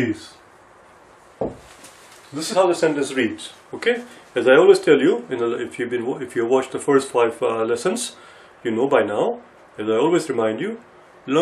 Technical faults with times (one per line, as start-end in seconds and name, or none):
2.52 compressed frames skipped